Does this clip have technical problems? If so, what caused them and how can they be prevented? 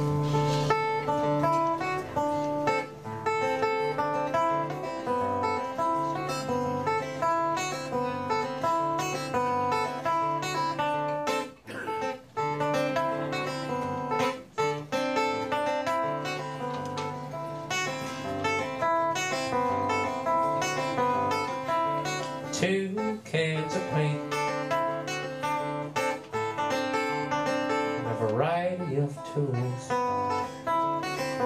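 No, this clip has no technical problems, so there is nothing to prevent.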